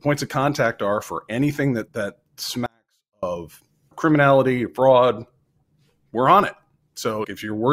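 Speech, with an audio dropout to a faint residue from 2.66 to 3.23 s, right after "for anything that that": the signal cuts abruptly for 0.56 s, leaving only faint sound about 40 dB down, likely a brief signal loss with the downstream path still live.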